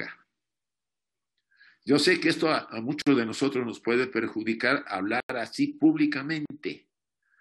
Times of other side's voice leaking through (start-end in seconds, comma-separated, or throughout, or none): none